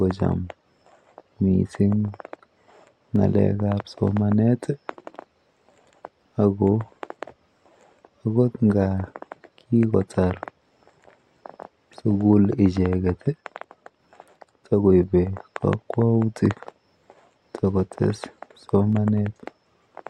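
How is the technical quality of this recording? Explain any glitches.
The recording has three brief glitches, each a single sharp click, at 3.16, 15.03 and 18.93 s. They are likely dropped samples: a tiny fraction of a millisecond of the stream goes missing, so the waveform jumps abruptly to a later value. Unlike a dropout, no audible stretch of speech disappears; there is only an isolated tick, seen as a thin vertical line across the spectrum.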